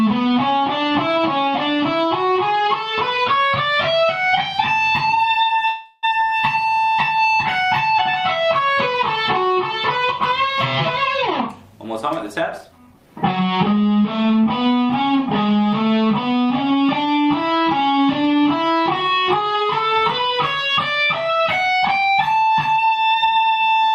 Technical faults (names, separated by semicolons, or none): call audio freeze; jitter buffer speed-up